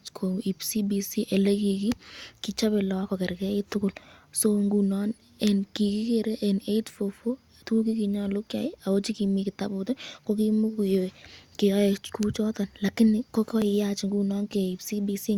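At 13.62 s the speech has a tiny skip. This is an overlap between stream segments. Two segment time stamps overlapped, so the player trimmed about 12 ms of real sound. The waveform jumps across the gap. It fits 6-second segments.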